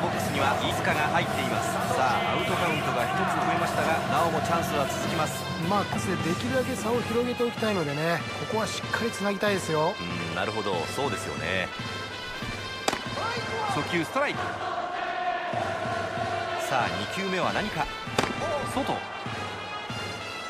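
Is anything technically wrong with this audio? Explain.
Yes, there is damaged data in a compressed stream, heard as brief glitches at 0.70, 5.95, 11.66, 14.38 and 18.39 s. At each point the decoder hits corrupt frames, loses sync and hunts for the next valid header, producing a short chirp or blip. On a spectrogram, each glitch appears as a thin vertical smear of broadband energy. On the waveform, it appears as an abrupt discontinuity.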